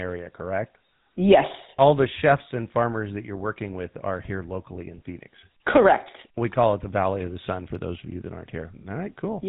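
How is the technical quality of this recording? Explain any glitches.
It's held back by GSM full-rate codec damage, plainly audible throughout the speech. The codec models the vocal tract, drives it with sparse regular pulses and cuts everything above 4 kHz, so it sounds buzzy, gravelly and dull, which fits 13 kbps GSM.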